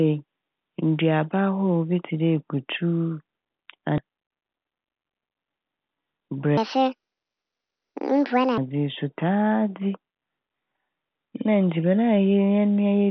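At 3.98 s a skip ahead occurs: a stretch of roughly 0.7 s of speech was discarded while later audio was already queued, likely when the jitter buffer overflowed. Nothing was inserted to cover the loss, so playback jumps straight from one side of the cut to the other. The speech lurches forward with no pause, and the two joined fragments sit awkwardly together where a chunk is plainly missing.

From 4.08 to 5.0 s a jitter buffer speed-up follows. The receiver was holding more audio than its target, so it trimmed short pitch-period-sized slices again and again to drain the excess, around a tenth of a second in total. The speech plays at about 112% of normal speed while the pitch stays put, so the delivery sounds briefly hurried and clipped rather than higher.

From 6.57 to 8.58 s, just before "yi so", a section at the wrong speed plays back at 1.6 times its proper rate, most likely because that portion was resampled against the wrong clock. 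Because speed and pitch are tied together here, the speech rises by roughly seven semitones and races along, taking on a thin, chipmunk-like quality until normal playback resumes. Throughout the clip the G.711 mu-law call path leaves nothing above 4 kHz, giving the narrowband telephone tone.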